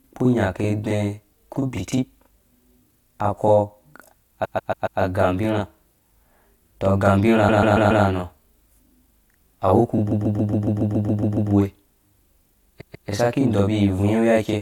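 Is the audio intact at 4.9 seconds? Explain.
No. Repeated frames run from 4.44 to 4.99 s, so 4.9 s falls inside the fault. A stretch of compressed audio about 139 ms long was delivered more than once, and the decoder played it again four extra times. That block size points to a run of about six frames. It sounds like a stutter, with the same fragment looping before the sound moves on, and it adds about 0.56 s to the audio.

Channel delay (doubling) is also present at 4.9 s, as it is throughout. One channel arrives 40 ms after the other, and the two are summed to mono. At that gap the late copy does not blend in. It is heard as a separate doubling, close to a short slap echo at equal level, trailing the speech.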